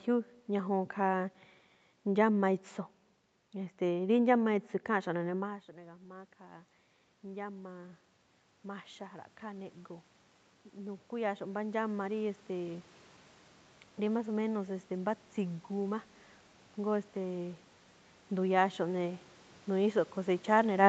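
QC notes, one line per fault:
5.04–12.92 s, automatic gain rising: after the talker moves back around 5.5 s, the input falls by about 16 dB. The gain control then slowly adds about 11 dB, lifting voice and room noise together. The waveform envelope and the spectrogram noise floor ramp up steadily.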